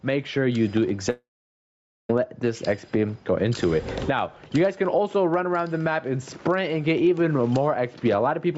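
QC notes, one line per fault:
Throughout: gain pumping. The background rises in every gap and ducks by roughly 20 dB under each loud sound, leaving loud and soft parts squashed close together. The likely cause is input gain set far too high, with a fast limiter repeatedly clamping it.
1.10 to 2.10 s: long network dropout. About 0.99 s of audio goes missing. The last sound is stretched into a brief fading buzz, then near-silence holds for about 0.86 s before the sound resumes. Packets likely never arrived, so that stretch is lost.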